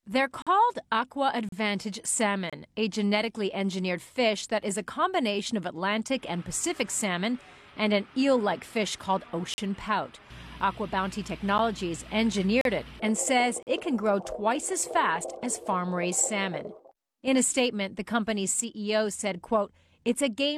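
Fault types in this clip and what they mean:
gap between stream segments: Misaligned segment timestamps leave holes filled with silence. Hard-edged dropouts of 3 to 45 ms recur in two runs, spaced about one second apart.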